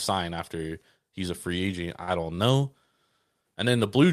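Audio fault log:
2.03–2.22 s and 2.35–2.39 s, short stall from a late packet: right after "he's a free agent" the sound hangs for a moment, then does it again briefly. A packet didn't arrive in time, the jitter buffer ran dry, and the receiver stretched the last bit of audio to cover the gap, about 45 ms the first time and 23 ms the second, before picking up exactly where it left off. Nothing is lost; playback just runs that much later afterwards.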